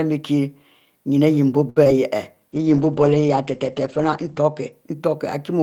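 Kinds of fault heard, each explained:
Short stall from a late packet: Around 1.69 to 1.78 s the speech is held about 67 ms too long, with a faint buzzy sustain. A packet arrived late, the jitter buffer emptied, and the receiver stretched the last sound, then resumed with nothing lost.
Short concealed packet loss: Just after, at about 1.84 and 1.87 s, two brief smears replace roughly 20 ms of speech each. That audio never reached the decoder in time, so the receiver extrapolated the preceding sound to bridge each gap before blending back.
Call bitrate drop: From about 2.53 to 4.78 s the speech turns muffled and rough, with the top end cut from 20 kHz to 8 kHz. The encoder was pushed from 32 to 10 kbps, holding that low rate for about 1.9 s.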